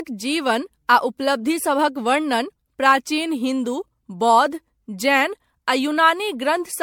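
Speech, and from start to finish it carries generation loss: a swirly, watery smear with a hollow, phasey colour and softened consonant attacks, more damage than a single lossy pass would leave. The likely cause is repeated MP3 encoding, around seven passes, with the character fitting a 96 kbit/s chain. On a spectrogram, content stops near 19.9 kHz, and the upper bands show flickering holes and smeared blocks; the waveform shows blurred transient edges.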